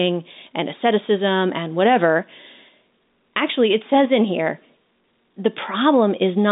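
No technical faults are audible.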